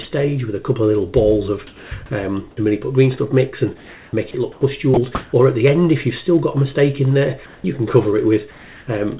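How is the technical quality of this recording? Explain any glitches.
The recording has several brief gaps and patches of artificial background. The audio is band-limited, with nothing above 4 kHz, which fits a narrowband call codec.

Sound dropped by the voice detector occurs at 0.02–0.05, 4.31–4.34 and 4.94–4.97 s. About 20–30 ms of sound vanishes into steady noise. A voice detector likely misjudged it as background.

Comfort noise in place of the background occurs at 1.67–1.91, 3.77–4.61, 4.94–5.33, 7.46–7.64 and 8.51–8.87 s. The real background turns flat and featureless. It is about 4 dB quieter at 1.67 s, about 4 dB louder at 7.46 s, and about 1 dB quieter at 8.51 s. This is likely synthetic noise filling transmission pauses.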